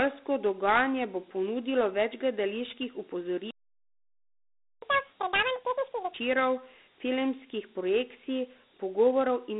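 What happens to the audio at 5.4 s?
The sound speeds up after "bo ponudilo več gledaliških". This is catch-up at higher speed, from 4.82 to 6.14 s. The player resamples its backlog at double speed, so pitch jumps roughly ten semitones. Throughout, Dialogic VOX ADPCM coding at 32 kbps confines sound to about 200 Hz to 3.7 kHz and adds gritty hiss.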